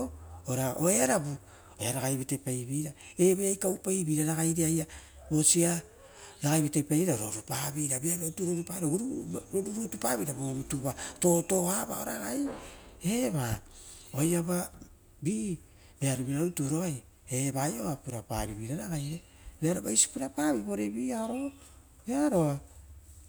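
Nothing in the speech stood out as a technical fault on listening.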